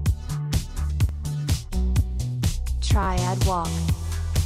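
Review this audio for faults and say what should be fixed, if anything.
A repeated buffer occurs at 1.09 s and from 3.03 to 3.07 s. Late data made the device replay its last 11.6 ms block, fitting a 512-sample buffer, once and then three times. Unlike a dropout, nothing falls silent: hard-joined repeats give a click, then a brief buzz. A larger playback buffer would prevent it.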